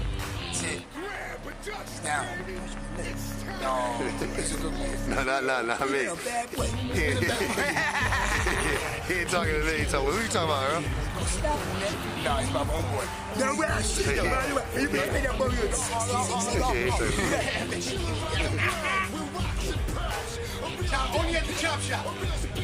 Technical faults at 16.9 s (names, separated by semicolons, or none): none